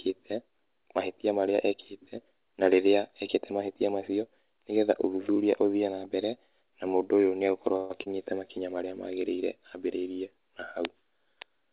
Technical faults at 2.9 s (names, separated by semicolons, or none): none